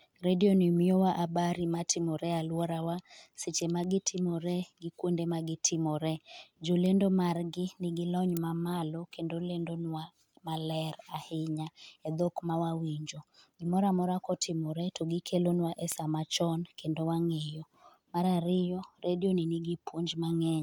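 Word clock ticks run through the speech from 0.82 s to 20.46 s: about fifteen short, sharp clicks, roughly one every one and a half seconds, some louder than others. The receiving device is running on its own clock instead of locking to the incoming digital stream, and the two rates differ by something like 15 parts per million. Each time they drift a full sample apart, a single sample is dropped or repeated, leaving a brief discontinuity that is heard as a tick.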